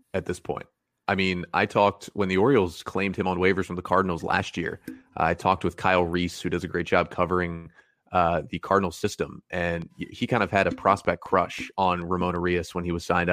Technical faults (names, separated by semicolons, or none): train of clicks